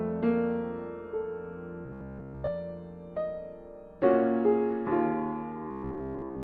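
Robotic sound from repeated short buffers hits this music at 1.86 to 2.49 s and 5.71 to 6.43 s: a rigid 66.8 Hz buzz, likely from roughly 15 ms chunks looping over most of the missing audio.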